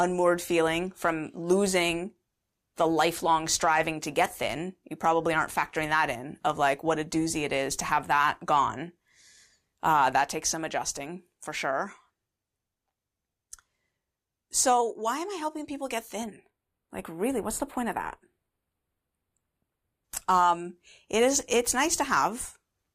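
This is speech. From 16.24 to 20.04 s, just after "I helping people get", there is channel delay (comb filtering). One channel lags the other by a fraction of a millisecond, a few samples. Summed to mono, the treble turns dull and hollow, with a first notch around 7 kHz.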